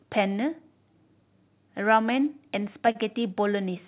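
From 2.92 to 2.97 s a sound drags with a faint buzz or dip. This is a short stall from a late packet: the jitter buffer ran empty, so 32 ms were stretched and nothing was lost.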